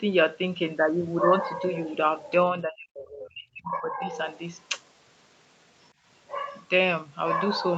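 From 2.53 to 4.12 s the speech dips, dropping by up to about 30 dB over roughly a second and a half: speech suppressed in double talk, likely an echo canceller turning down its own talker along with the loudspeaker echo. Between 2.95 and 3.19 s a second, faint voice about 20 dB below the speech slips through, the other side's voice leaking through, likely from incomplete removal of loudspeaker echo. Throughout the clip, the sound tops out near 8 kHz from the call's bandwidth.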